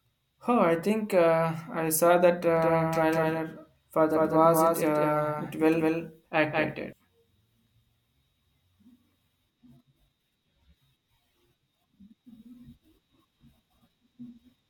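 Right after "uh I saw that", at 2.57 s, the speech picks up a doubled audio track that runs until 6.93 s. A second full-band copy trails the original by roughly a fifth of a second, sitting about 5 dB down. It has no decay or room colour, and it cuts in and out abruptly. That points to the likely cause being the same signal captured twice, once through a slower path.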